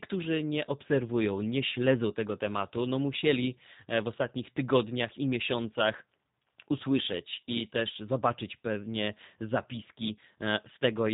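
Throughout, the speech carries the sound of the G.729 codec, consistent with an 8 kbit/s stream: a pulse-based synthesis that leaves the voice plainly rough and slightly synthetic, with nothing above about 3.8 kHz.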